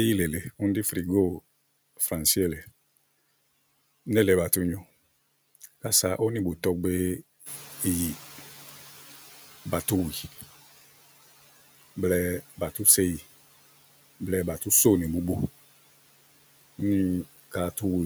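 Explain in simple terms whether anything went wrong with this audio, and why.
At 7.45 s the room noise suddenly gets louder. The noise suppressor is catching up, so the noise comes through with less reduction at first before fading over about 3 seconds, ending at 10.33 s. A constant room noise would not fade like that.

Between 12.41 and 12.86 s, this is speech cut by the noise suppressor. Small bits of speech, roughly a tenth of a second in total, sound swallowed or faint. The background is still there, so this is not a dropout, where everything would go silent.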